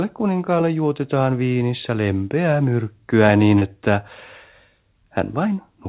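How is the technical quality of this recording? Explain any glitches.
The recording has one real glitch, heard through a narrowband call path with nothing above 4 kHz, which fits G.711 mu-law at 64 kbps. At 3.59 to 3.64 s, right after "viinissä lempeää myrkkyä niin", there's short concealed packet loss: about 30 ms arrived too late, so the receiver stretched the preceding speech to cover the hole before rejoining the real signal. You hear it as a quick smear or wobble, and a short consonant there may be lost.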